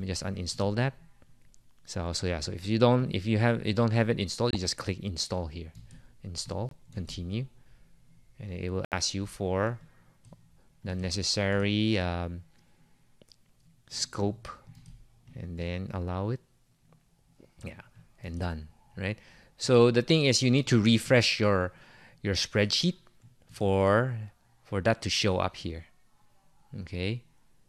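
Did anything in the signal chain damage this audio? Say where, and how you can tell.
Yes. At the codec and playback stage, corrupt frames were muted: bit errors in the compressed stream made the decoder reject frames, and the player filled each rejected frame with silence. The dropouts cut in abruptly at 4.51 s (48 ms), 6.69 s (42 ms) and 8.85 s (82 ms). Their lengths fit whole frames, roughly one to three each, and the audio resumes on time afterwards, so the timing is preserved rather than stretched.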